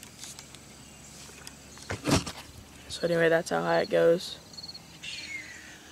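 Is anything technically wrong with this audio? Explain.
No, nothing technically wrong can be heard anywhere in this audio.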